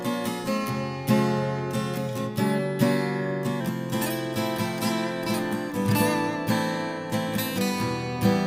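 From the start to 3.61 s the audio has a wrong sample rate: it runs 1.09 times fast and about 1.47 semitones high, which fits 44.1 kHz material played at 48 kHz without conversion. Because speed and pitch rise together, this is not a pitch shift or time-stretch.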